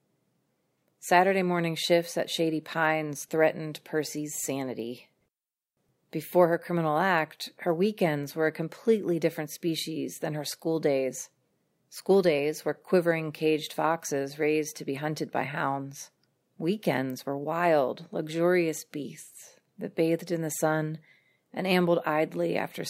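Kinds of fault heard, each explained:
Sample clock jitter: the converter's sampling clock wanders, so each sample is captured a little early or late at random, on the order of a couple of microseconds. Because the resulting error scales with how fast the waveform is changing, it rides on the speech as a fine hiss and roughness, roughly 35 dB below the signal, that swells on loud passages and bright sibilant sounds and drops away in pauses, throughout the clip.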